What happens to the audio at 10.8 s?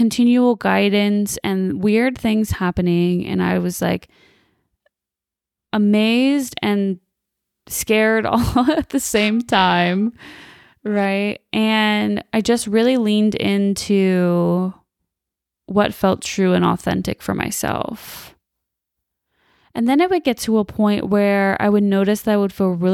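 At 10.8 s you're inside a stretch of periodic clock jitter, from 9.05 to 11.05 s, just after "all at the": the converter clock wobbles at around 1 kHz, adding sidebands that give the speech a rough, metallic edge.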